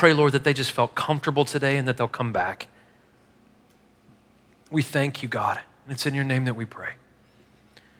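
At 2.33 to 2.43 s, a lost packet rebuilt from error correction. Backup copies fill about 60 ms, likely three packets. No gap, but briefly rougher and noisier.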